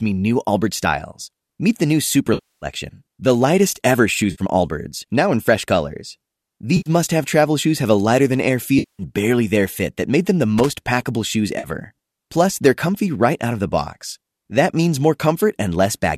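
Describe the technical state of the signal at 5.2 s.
At 5.2 s the speech signal is intact, with no fault, and only the light coloration that a low-delay AAC encoding likely leaves throughout.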